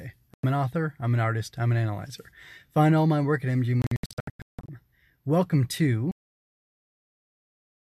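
Speech that cuts out twice: a short hole of about 96 ms from 0.34 to 0.44 s just before "an author I'm an", then a broken stretch from 3.82 to 4.69 s after "all my work at", where several gaps, the longest 168 ms, remove about 0.62 s of sound. This is a digital broadcast dropout: the receiver muted while frames were missing or corrupt, and the speech in those gaps is lost. At 6.11 s, after a 20 ms silence, the sound turns dull and boxy to the end, with nothing above 3.8 kHz and a new noise floor roughly 35 dB under the speech, at much the same level. The likely cause is the input switching to a poorer device.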